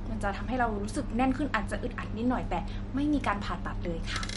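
Throughout the speech, what went wrong is likely MP3 compression at a starved bitrate, fitting roughly 48 kbps. The encoder has cut everything above 11.2 kHz and drops weak frequency lines frame by frame, leaving a dull top end and plainly audible watery, swirling damage.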